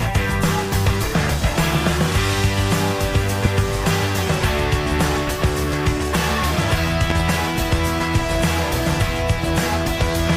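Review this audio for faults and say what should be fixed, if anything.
A loud pop occurs at 3.45–3.48 s, and a pair of pops at 7.10–7.23 s, each peaking about 15 dB above the sound, which continues underneath. The likely cause is a voltage step from a plug, switch or static discharge entering the signal chain. To prevent it, secure connectors, ground equipment properly and avoid switching or replugging while recording.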